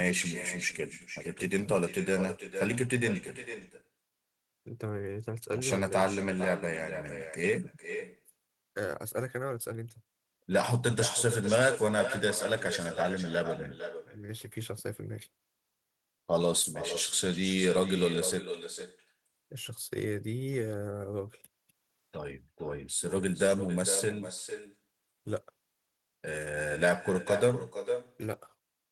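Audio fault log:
throughout, echo with no canceller: the far end is playing the call through a loudspeaker into an open microphone with nothing cancelling it, so the speech returns after the network round trip, about half a second late, as a thinner copy about 9 dB below the original.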